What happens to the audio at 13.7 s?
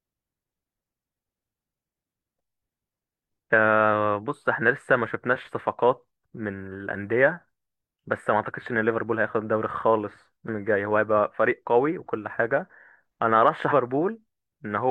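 At 13.68 to 13.73 s, compressed frames are skipped. Whole frames were lost or rejected by the decoder, so the speech jumps ahead by about 150 ms, which points to roughly four frames of about 43 ms each. The speech skips ahead at that join.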